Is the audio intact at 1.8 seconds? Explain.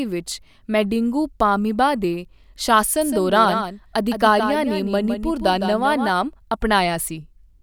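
Yes, at 1.8 seconds the speech plays through intact, with no dropout, click, distortion or other fault to be heard at that point.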